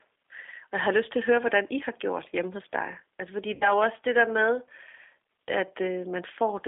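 G.729 codec throughout the clip: the speech is rebuilt at 8 kbit/s from a vocal tract filter, a pitch predictor and a few pulses per frame, so it sounds rough and faintly synthetic, with the band squeezed to roughly 300 Hz to 3.6 kHz.

VoIP packet loss concealed by the speech codec from 3.55 to 3.73 s, just before "også det der med": about 60 ms of audio went missing, which fits three lost 20 ms packets. The decoder stretched its last pitch and filter into a sound that fades, and the voice stays weak and distorted after the gap while the decoder rebuilds its state.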